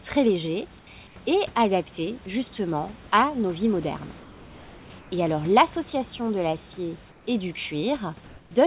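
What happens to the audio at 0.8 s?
From 0.79 to 0.87 s, just before "et adaptés justement à", the room background becomes a flat, featureless hiss about 5 dB quieter, likely comfort noise in place of the background inserted during a transmission pause; a spectrogram shows a smooth, uniform band.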